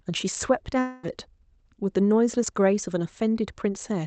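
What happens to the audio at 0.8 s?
A long network dropout runs from 0.79 to 1.06 s, likely caused by packets failing to arrive for roughly a quarter of a second. The receiver covers almost the whole gap by stretching the last received speech into a synthetic buzz that fades rather than dropping to silence. About 240 ms of the original speech is never played, so when the signal resumes at 1.06 s it picks up further on with that part missing.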